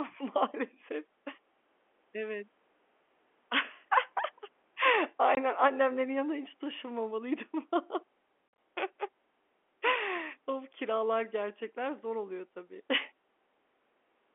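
Speech on a G.711 telephone-band line, with packet loss filled with silence. There's a hard-edged 20 ms hole at 5.35 s, just before "annemlerin yanından hiç", then 80 ms of dropouts scattered across 8.48 to 8.58 s, longest run 50 ms. That fits 10 ms packets.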